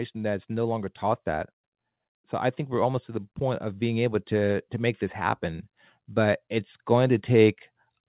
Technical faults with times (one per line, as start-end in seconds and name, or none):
2.29-5.48 automatic gain rising